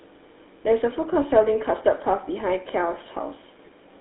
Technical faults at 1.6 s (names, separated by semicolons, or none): GSM full-rate codec; speech suppressed in double talk